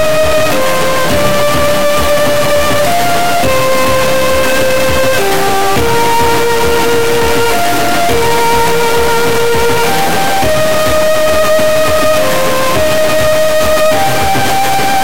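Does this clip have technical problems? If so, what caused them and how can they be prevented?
Yes. Throughout the clip the sound carries a harsh, buzzy distortion, and even the quiet passages are filled with loud noise. This points to a stuck bit, likely a high-order bit of the converter or data line held at one value. The error step is very large, roughly 5 dB below full scale. On a waveform, samples jump by that fixed offset in a pattern that follows the signal. A spectrogram shows dense broadband energy everywhere. Testing converters and wiring with known signals before recording would catch this.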